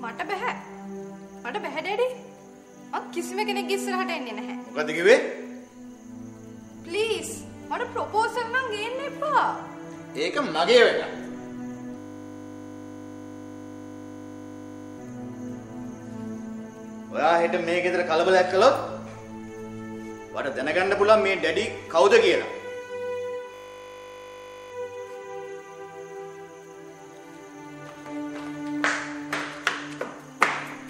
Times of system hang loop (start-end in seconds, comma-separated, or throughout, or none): 11.98-14.98, 23.54-24.72